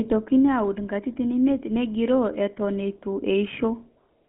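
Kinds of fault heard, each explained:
GSM full-rate codec: The speech was carried through the original GSM mobile codec, which models the vocal tract as a filter and drives it with a coarse train of regularly spaced pulses, keeping only one excitation sample in three. The damage fits a stream of about 13 kbps. The result is a plainly audible buzzy, gravelly roughness throughout, confined to a telephone band of about 150 Hz to 3.4 kHz, with nothing above 3.7 kHz.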